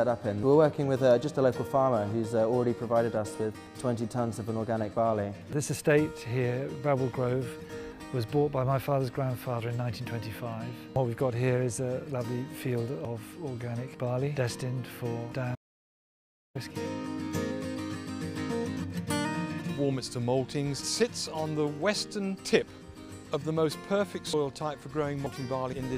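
At 3.67, 5.53, 10.96 and 13.05 s the audio jumps abruptly, each a likely dropped buffer (overrun): samples were overwritten before being read, so roughly a tenth of a second (shorter at 13.05 s, longer at 10.96 s) vanishes and the edges butt together. From 15.55 to 16.55 s an audio dropout to silence cuts the sound to silence, no room tone, for about one second, likely a lost input with recording continuing. Further overrun skips follow at 24.33 and 25.26 s.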